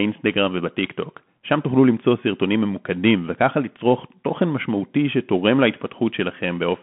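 Bluetooth CVSD headset codec damage runs through this speech clip throughout. Everything above 3.8 kHz is gone, leaving a 150 Hz to 3.4 kHz band. The one-bit up-down coder, consistent with a 64 kbps CVSD link, lags fast loud changes, so sibilants turn scratchy over a grainy hiss.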